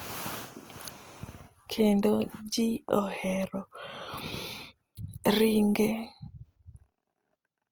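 Throughout, the speech sounds rough and grainy, with noise-like texture reaching up to 20.2 kHz. This fits Opus compression in music mode, likely at around 24 kbps.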